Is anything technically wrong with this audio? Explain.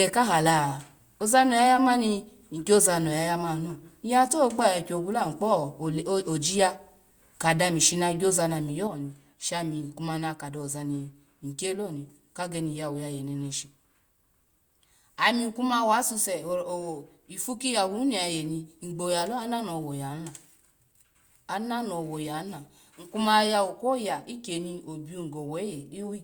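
Yes. From 8.87 s to the end, the speech drops abruptly by about 6 dB and stays lower. The likely cause is one channel drops out: one side of the stereo feed stops carrying signal, so when the two channels are summed to mono, material common to both arrives at half its former strength. The result is a sudden, lasting step down in loudness, with anything present only on the lost side gone.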